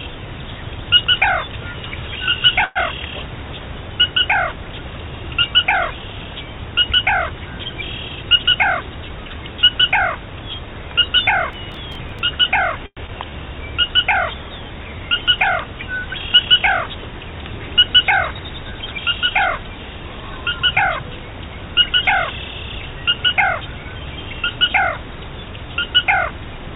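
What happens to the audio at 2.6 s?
From 2.64 to 2.78 s comes a call audio freeze: the last sound stretches into a brief fading buzz, likely from delayed packets draining the jitter buffer. Unlike packet loss, nothing is removed; the audio resumes where it stopped, 116 ms late.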